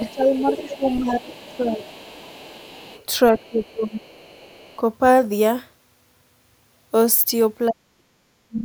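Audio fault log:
0.00–3.06 s: other side's voice leaking through. A second voice sits faintly underneath, about 20 dB below the speech. This is likely loudspeaker echo the canceller left in.
0.11–1.82 s: speech suppressed in double talk. The talker dips by up to about 15 dB, for about a second in total. The canceller likely turned down both voices at once.
3.32–4.08 s: speech suppressed in double talk. The voice drops harder, up to about 20 dB, for roughly 0.7 s. This is likely the canceller mistaking speech for echo.
3.38–4.76 s: other side's voice leaking through. Another voice faintly returns, about 30 dB down. Residual loudspeaker echo is the likely source.
7.68–8.65 s: speech suppressed in double talk. The voice nearly vanishes, falling by up to about 40 dB over about a second. The likely cause is heavy echo suppression during overlap.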